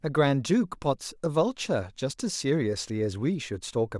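Nothing in this bit of speech points to a technical fault, so there's nothing to flag here.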